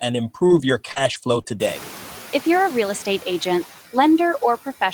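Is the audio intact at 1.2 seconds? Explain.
No. Scattered short gaps run from 0.39 to 1.68 s, covering 1.2 s. About three brief holes, the longest around 40 ms, lost 80 ms of audio. The receiver patched them by extending the preceding sound over 140 ms, leaving small ticks, smears or hiccups. Noise suppressor artifacts are also present here. The suppressor cuts the bands it judges to be steady noise by about 4 dB, frame by frame, so the leftover background sinks and swells and can flutter or warble.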